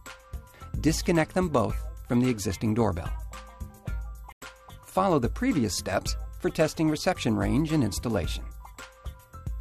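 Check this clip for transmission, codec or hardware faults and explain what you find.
One fault stands out, a digital broadcast dropout from 4.32 to 4.42 s. The receiver stopped getting usable frames and muted, so about 96 ms of sound simply vanishes, which fits roughly four lost frames. The waveform drops to a flat line and the spectrogram shows a blank vertical gap across all frequencies before the audio resumes.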